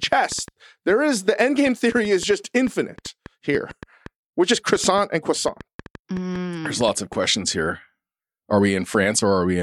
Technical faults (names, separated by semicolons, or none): train of clicks